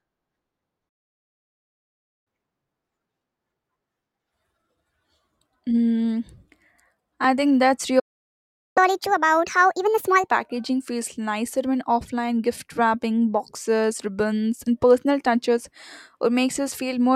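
At 0.89 s the speech cuts out mid-flow and stays silent until 2.27 s, a playback stall of 1.37 s, likely from the player running dry of data or its thread being blocked. From 2.27 to 5.27 s the player catches up at higher speed, resampling its backlog at 1.1 times normal, so the voice runs quicker and sits about a semitone and a half sharp before settling. At 7.24 s the audio skips ahead at a dropped buffer, likely an overrun where roughly 5 ms of samples were overwritten before being read and the two edges were spliced together, giving a small jump with no gap. A second stall silences the audio from 7.99 to 8.78 s, 0.77 s. The catch-up that follows, from 8.78 to 10.31 s, runs at 1.5 times speed and lifts the pitch by roughly seven semitones, an obvious chipmunk-like rise.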